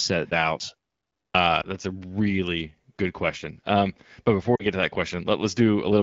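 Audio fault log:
1.23–1.34 s, clipped start after a pause: after roughly half a second of silence, the sound begins abruptly and its first 112 ms are missing. This points to the output device having dropped into a low-power or unlocked state during the pause and needing that time to wake and resynchronise. The opening of the utterance is swallowed, so it starts hard out of silence with no onset.
1.61–1.68 s and 4.55–4.66 s, lost AMR speech frames: two short concealment events in the AMR-WB stream. The first hides about 20 ms of audio, which fits a single lost frame, and is heard as a brief dip or warble. The second hides about 40 ms, which fits two consecutive lost frames. There the decoder repeats the last good pitch and spectral settings at falling gain, so the sound smears briefly, sags toward silence, and comes back weak or rough for a moment.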